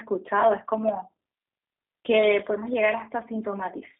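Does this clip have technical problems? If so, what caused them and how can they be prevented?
Yes. G.729 codec damage runs through the whole clip. The speech is squeezed into a band of 250 Hz to 3.7 kHz. It sounds rough and synthetic, which fits an 8 kbit/s coder rebuilding speech from a filter and pulses. Use a wideband codec to prevent it.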